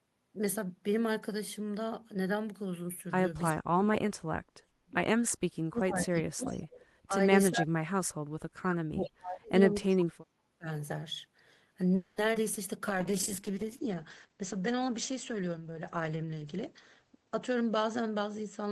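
From 3.52 to 4.97 s, and again at 5.33 to 5.39, 5.58 to 6.76, 7.06 to 7.13, 7.50 to 8.34 and 8.52 to 10.68 s, the talker is pushed down by speech suppressed in double talk. This likely happens because the echo canceller mistakes overlapping far-end speech for echo and attenuates everything. The waveform shows the envelope collapsing by about 20 to 40 dB in stretches. The spectrogram goes nearly blank, so the sound dips, dulls and breaks into pieces.

Inside that stretch, at 6.46 to 6.85 s and briefly at 9.04 to 9.10 s, there is an echo leak. Residual loudspeaker pickup that was likely not fully cancelled returns as a copy trailing by 368 ms, about 20 and 30 dB below the speech. On a spectrogram it shows as a faint, offset repeat of the harmonic pattern, heard as a ghostly shadow.

From 11.95 to 12.20 s a call audio freeze fills 220 ms while packets were likely held up and the jitter buffer emptied. 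The last sound is stretched into a fading buzz, seen as flat, smeared horizontal bands. Playback then resumes where it stopped, later than before, with nothing missing.

At 12.33 to 12.37 s and 12.54 to 12.58 s, short concealed packet loss drops about 40 ms each time. Only about 10 ms is synthesised in its place, so each event is a quick smear, a tiny discontinuity in the waveform.

From 12.81 to 14.27 s a jitter buffer slow-down plays at 96% speed, adding 65 ms by repeating pitch periods. The spectrogram shows slightly elongated syllables at unchanged harmonic spacing, and the sound is drawn out.

From 12.89 s to the end, a call bitrate drop takes the encoder from 32 to 10 kbps for about 4 s at its lowest. Bandwidth falls from 20 kHz to 8 kHz, visible as a hard ceiling across the spectrogram. The coarser coding adds a rough, watery, muffled quality.

From 14.79 to 16.57 s a jitter buffer speed-up runs at 111%, trimming about a fifth of a second of pitch periods. 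Syllables appear compressed in time at the same pitch, and the sound comes across as hurried.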